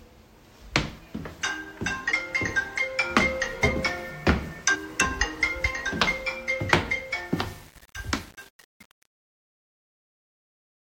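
From 7.36 s to the end at 10.9 s, the fade-out carries truncation distortion. The gain stage evidently dropped low-order bits without dither, and the coarseness fits a stage keeping only 9 bits. As the level shrinks, the waveform collapses into a few square steps, so the tail turns gritty. Unlike a noise gate's chatter, the roughness worsens steadily as the fade deepens.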